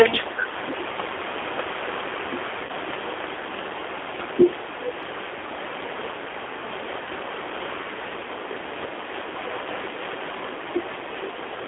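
Speech, carried over a narrow phone line, runs from 300 Hz to 3.5 kHz. It sounds rough and synthetic throughout. That is the G.729 codec at work. The speech is rebuilt from a vocal tract model and a few pulses per frame, which fits 8 kbit/s G.729A. The coding damage is plainly audible. At 2.65 to 2.72 s there is VoIP packet loss concealed by the speech codec. About 40 ms of audio is missing, which fits two lost packets. The decoder stretches its last pitch and filter into a fading buzzy tone or coloured noise. The voice stays weak briefly after the gap. From 9.92 to 10.0 s the voice dips by about 5 dB for around 70 ms. This is likely speech suppressed in double talk. The echo canceller turns the talker down while the far side also speaks.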